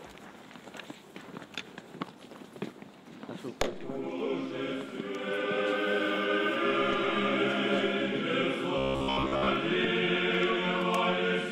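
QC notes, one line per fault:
8.78–9.49 s, robotic sound from repeated short buffers: the sound turns into a rigid metallic buzz at 66.8 Hz, likely because late-arriving audio was filled by looping a roughly 15 ms chunk over most of this stretch. A spectrogram shows evenly spaced harmonic lines; the waveform shows a short cycle repeating.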